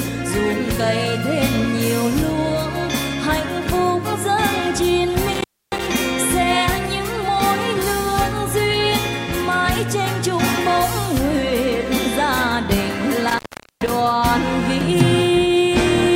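At 5.29–5.87 s and 13.28–13.91 s, an intermittent contact opens for 282 ms and 426 ms: crackling edges, faint-hiss gaps, flat waveform, clicks as vertical spectrogram streaks.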